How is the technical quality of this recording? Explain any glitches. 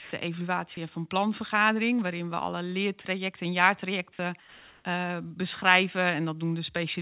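Two brief glitches in the call audio affect the edges of the speech; the band stops at 4 kHz throughout, which fits a G.711 telephone codec.

Sound dropped by the voice detector, 0 to 0.11 s: just before "de evaluatie van planvergadering", the onset is swallowed, losing about 50 ms of speech to steady noise. The sender's detector likely judged the quiet start as background. Unlike a plain pause, actual speech is missing here.

Comfort noise in place of the background, 4.4 to 4.85 s: after "alle leertrajecten en jaartrajecten", the room background, about 28 dB below the loud parts, turns into flat synthetic hiss about 2 dB quieter, likely from discontinuous transmission. No speech is lost; only the background's texture changes.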